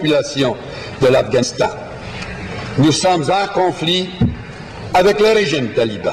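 At 1.42 to 1.44 s there is damaged data in the compressed stream: part of the encoded file was lost, zeroed, overwritten or mixed with unrelated data, so the decoder could not read the frame there correctly and had to hunt for the next valid frame header to regain sync. In the sound this is a brief disruption lasting about 20 ms, heard as a sudden chirp, squawk, click or short hole that breaks the flow of the audio.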